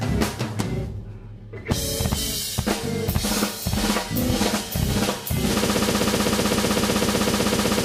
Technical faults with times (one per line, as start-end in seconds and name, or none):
5.64-7.84 broken-record loop